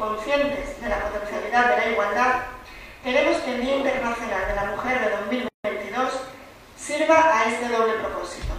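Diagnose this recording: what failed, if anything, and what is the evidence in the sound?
At 5.48 s the sound drops into a silence of about 160 ms, ending at 5.64 s, with edges smeared by the codec. It then resumes exactly where it left off, with nothing missing. This is a gap at a join of encoded pieces, a codec-stage fault. The audio was encoded in separate pieces and spliced without trimming. The encoder's start-up delay and the padding of the previous piece's final frame both remain as dead air at the seam.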